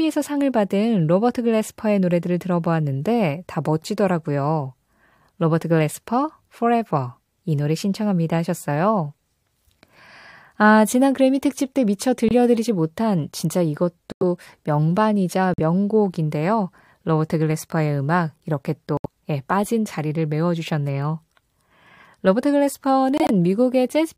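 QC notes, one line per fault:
12.29 s, 14.12 s, 15.54 s, 18.97 s, 23.16 s: corrupt frame muted. Dropouts last 36 ms, 101 ms, 60 ms, 83 ms and 148 ms, each starting abruptly in the speech. Damaged compressed frames were rejected by the decoder and replaced with silence, and the speech resumes on time after each gap.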